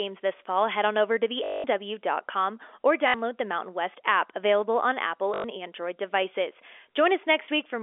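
At 1.44 s, right after "head on over to", the sound freezes into a robotic stutter for about 0.2 s. Then come shorter ones at 3.08 s (60 ms) and 5.34 s (100 ms). This is packet loss with the last packet repeated: the receiver replays its final packet until new data arrives. The run buzzes near 50 Hz, which fits 20 ms packets. On a waveform these runs show as identical repeating blocks. On a spectrogram they show as vertical striations over frozen, telephone-band content.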